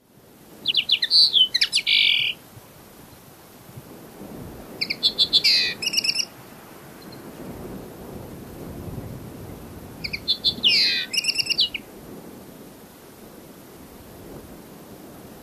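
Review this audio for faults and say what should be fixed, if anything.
Compressed frames skipped at 0.70–0.72 s, 2.02 s, 5.44 s and 10.57 s: the audio jumps ahead by roughly 70, 70, 150 and 100 ms, consistent with a few 23.2 ms frames missing or rejected as corrupt. Prevent it by verifying file integrity after transfer and re-encoding from an intact source.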